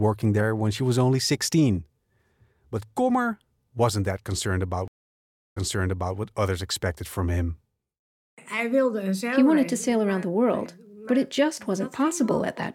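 At 4.88 s, right after "wasn't that concerned about", the speech drops out into about 0.69 s of silence, then comes back roughly 0.6 s behind where it stopped, so a short stretch is heard twice before the audio settles at 6.17 s with "what others expected from". This is a stream reconnect: the connection broke, the player reopened it and started a fresh decoder, and the server resent a burst that began earlier in the stream.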